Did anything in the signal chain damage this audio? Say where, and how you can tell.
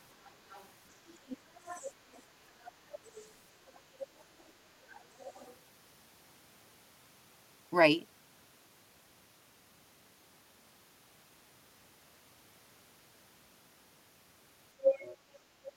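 Yes. A faint second voice sits well below the talker at 0.24–0.67, 1.29–2.22, 2.64–3.3, 3.74–4.43 and 4.91–5.54 s, then returns nearly as loud at 14.83–15.17 s. This is the other side's voice leaking through, likely from call processing whose echo canceller left residual loudspeaker echo.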